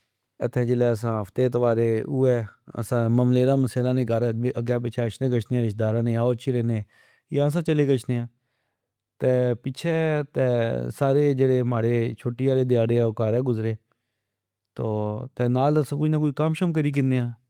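No technical faults can be heard anywhere in the recording; the signal stays steady and intact throughout.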